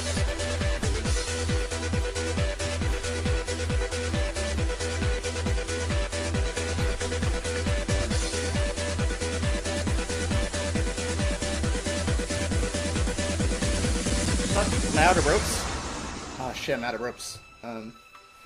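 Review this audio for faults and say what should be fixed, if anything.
There are CD scratch ticks from 13.79 to 14.89 s: eight regular ticks, about seven a second, the longest around 5 ms. A blemish on the disc wipes out more data than error correction can rebuild on each rotation, so the player patches or mutes those samples. To prevent it, clean or replace the disc, or rip it with a secure ripper that re-reads damaged sectors.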